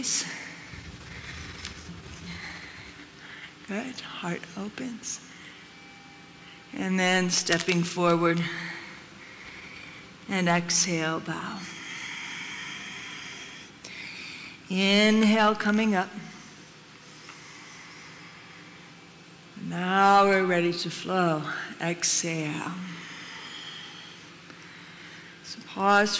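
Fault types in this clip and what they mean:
Resampler restarted on every block: from 21.7 s to the end, each 100 ms block is rate-converted in isolation, consistent with 44.1 kHz down to 16 kHz. Its edges lack neighbouring samples, leaving a small error heard as steady 10 Hz ticking under the sound.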